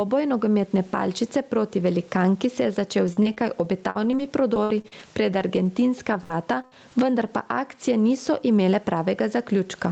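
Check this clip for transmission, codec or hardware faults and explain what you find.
Two faults stand out in this speech clip: gain pumping throughout and repeated packet loss in the middle.

Gain pumping runs through the whole clip. The level swings by roughly 15 dB, squashing loud and soft parts closer together, likely from excessive input gain with a fast limiter clamping it.

Repeated packet loss (robotic sound) affects 3.07 to 6.93 s. Thirteen short dropouts, the longest 62 ms, are patched by extending prior audio, producing choppy speech with fragments missing.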